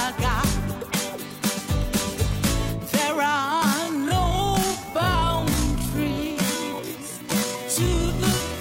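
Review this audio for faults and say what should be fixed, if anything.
From 3.18 s to the end at 8.60 s there is a time-stretched section. The pace abruptly drops to about 0.54 times normal speed while the pitch stays the same, so the sound drags. This is likely a pitch-preserving stretch that repeats short overlapping pieces to fill extra time. On a spectrogram, events widen horizontally while harmonic spacing stays fixed, and onsets blur. The waveform shows drawn-out envelopes with repeated grains. To prevent it, edit to length by trimming or re-recording rather than stretching audio to fit a duration.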